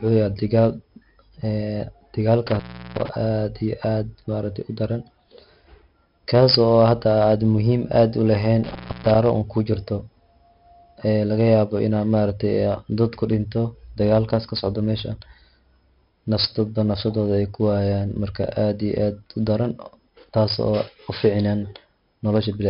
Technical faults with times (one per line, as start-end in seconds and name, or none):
0.00-22.69 4-bit ADPCM compression
2.47-3.09 intermittent contact
8.64-9.15 intermittent contact